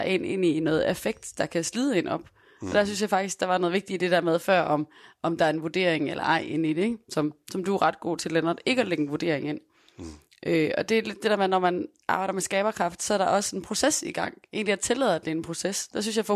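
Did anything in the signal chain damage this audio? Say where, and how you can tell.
No, nothing in the signal chain audibly damaged this speech.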